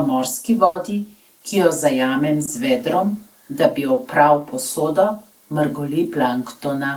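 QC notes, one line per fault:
0.65–0.77 s, burst of packet loss: About 100 ms of the stream failed to arrive in time. The receiver covered the gap by extending the last sound it had and letting it fade out, so there is no silence, only a held, decaying tail. When real audio returns, it picks up 100 ms further on. The material in between is simply gone, which gives a jump in the flow.
2.45–2.49 s and 3.93–3.99 s, short concealed packet loss: Two brief dropouts, about 20 ms and 40 ms long. In each, the decoder filled the hole by continuing the preceding sound and then blending back into the real signal. This is heard as a quick smear or wobble rather than a gap. The first falls just before "z vedrom da bi". The second sits between "z vedrom da bi" and "opral posodo".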